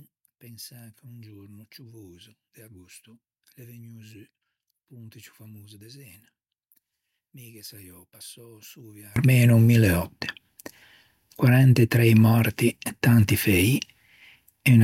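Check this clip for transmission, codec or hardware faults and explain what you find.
One fault is present, in the opening stretch. From 0.0 to 9.16 s, up to "mille òtte", one stereo channel likely has inverted polarity, so the two sides work against each other when folded down to mono. The centred speech, common to both channels, largely cancels and drops by about 28 dB. What survives is only the small difference between the channels, a faint copy of the speech. The level returns once the polarity problem ends at 9.16 s.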